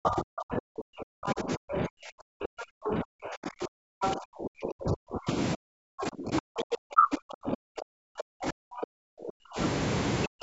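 A speech recording with repeated speech suppression in double talk. The talker's level collapses from 0 to 5.29 s, again from 5.55 to 9.58 s, and briefly from 10.27 s to the end. At its deepest the voice falls by roughly 40 dB. The likely cause is an echo canceller that heard both sides at once. It could not tell the talker from loudspeaker echo, so it turned everything down.

Inside the first stretch there is also the other side's voice leaking through. Short scraps of a second voice surface at 1.26 to 1.33 s, 1.73 to 1.77 s, 2.86 to 2.90 s and 4.02 to 4.11 s. The first three sit about 5 to 10 dB below the talker's level, and the last one is about as loud. Each lasts under a tenth of a second. This is likely loudspeaker playback that the canceller failed to fully remove from the microphone. The call microphone processing passes nothing above 8 kHz.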